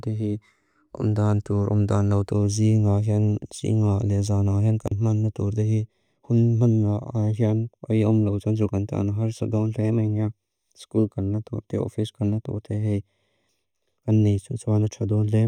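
From 2.31 s to the end, one channel runs a fraction of a millisecond behind the other, roughly 0.3 ms, and the two are summed to mono. This channel delay causes comb filtering: components shared by both channels cancel at evenly spaced frequencies, with the first notch around 1.5 kHz and further notches repeating above it. The speech turns hollow and phasey, with a fixed colouring that stays constant through the rest of the clip.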